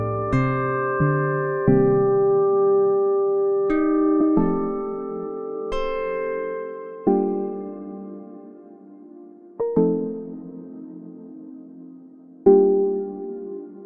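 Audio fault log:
No faults are heard in this clip. The log has nothing to record against any point in the audio.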